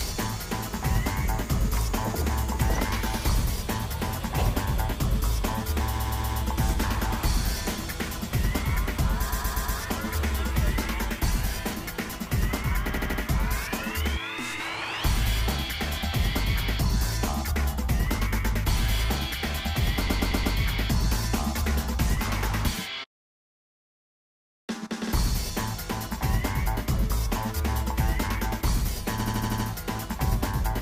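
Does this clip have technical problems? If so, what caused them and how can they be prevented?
Yes. Six times the sound stutters, with a short fragment looping: 5.93–6.41 s, 9.29–9.77 s, 12.89–13.21 s, 18.35–18.47 s, 20.07–20.55 s and 29.19–29.67 s. These are repeated frames. A 120 ms block (80 ms at 12.89 and 29.19 s) was written again, up to six extra times, which fits a run of six or four compressed frames. Each stutter lengthens the audio by 120–480 ms. Checking frame sequence numbers when writing or sending the stream prevents these duplicates.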